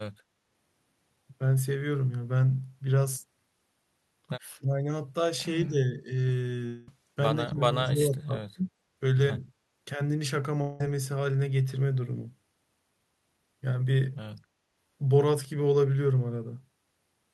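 From 4.57 to 4.86 s and again from 5.67 to 6.1 s, the speech dips sharply, by about 25 dB and then about 10 dB. This is likely speech suppressed in double talk. The echo canceller mistook the talker for echo and turned them down.

At 6.66 s a long network dropout likely hits. About 210 ms of audio never arrives. A fading buzz fills the gap until 6.88 s, and speech resumes with that part missing.

From 7.45 to 8.36 s the speech sinks again, by about 20 dB at its deepest. It ducks once more, briefly, from 8.54 to 8.64 s, by about 25 dB. Both are likely double-talk suppression again.

At 10.61 s a second likely dropout removes about 190 ms. A decaying synthetic fill covers it until 10.81 s.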